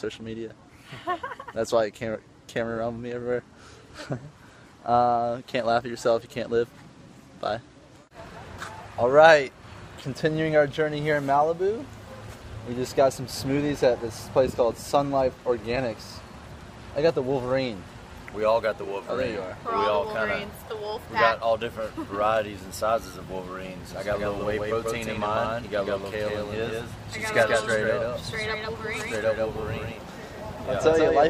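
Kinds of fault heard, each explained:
Doubled audio track: from about 23.9 s to the end, a second full-band copy trails by roughly 150 ms, a bit quieter, likely from a slower capture path.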